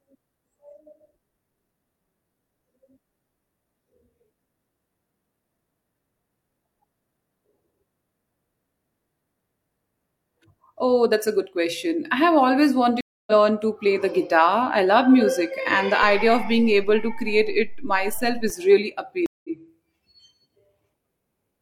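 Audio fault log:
13.01–13.31 s, stream reconnect: after "question I have always", a 263 ms gap, then speech resumes roughly 0.2 s later at "to play the guitar"; waveform shows flat silence then a fresh fade-in.
16.03–18.5 s, DC step: after "love music and the", the waveform's zero line jumps at 16.03 s and returns by 18.5 s, heard as low thumps; spectrogram shows a broadband click at each step.
19.26–19.49 s, stream reconnect: a 182 ms silent gap, then speech resumes about 0.15 s further on as a new decoder starts; spectrogram shows a blank band and a fade-in at the restart.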